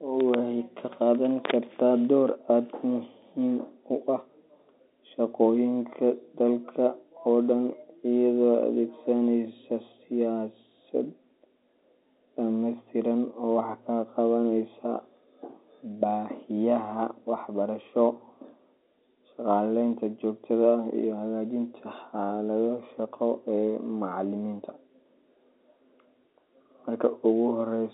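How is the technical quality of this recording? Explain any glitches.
No glitches turn up anywhere in the recording; the speech comes over a G.711 telephone line in the usual way, band-limited to roughly 250 Hz to 3.7 kHz with at most a faint trace of the coding noise that tracks the signal level.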